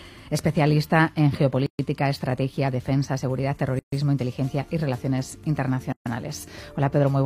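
The sound drops out three times, at 1.66–1.79 s, 3.79–3.92 s and 5.92–6.06 s, each gap about 130 ms, every 2 s. This is a gap at a join of encoded pieces. Separately encoded segments were spliced without trimming encoder delay and padding.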